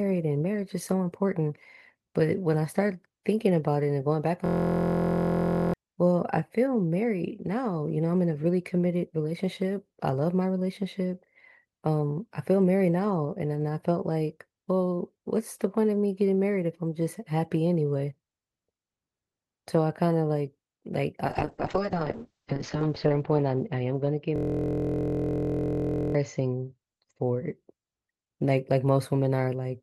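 At 4.46 to 5.74 s a system hang loop occurs: the system froze while a 23.2 ms buffer, consistent with 1024 samples, replayed, giving a steady 43 Hz buzz that replaces about 1.5 s of speech. From 21.27 to 27.62 s a call bitrate drop cut encoding from 32 to 9 kbps and bandwidth from 20 kHz to 8 kHz, so the speech turns rough and muffled. Inside it, from 24.36 to 26.15 s, the same hang buzz returns and replaces about 2 s of speech.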